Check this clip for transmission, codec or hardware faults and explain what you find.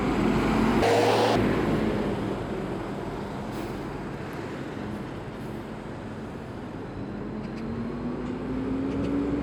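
Audio read two samples at a time (double speed), from 0.83 to 1.36 s: the reader grouped pairs of samples into single frames, as if it expected two channels or samples twice as wide. The sound plays at 2x speed, an octave (12 semitones) higher.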